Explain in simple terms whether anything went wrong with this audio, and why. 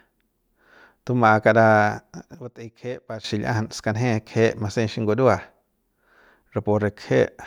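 Something did go wrong: a sudden gain jump. At 2.35 s the whole recording, voice and background hiss alike, abruptly drops much quieter, then snaps back at 3.24 s. That likely comes from a volume setting being switched instantly instead of eased in.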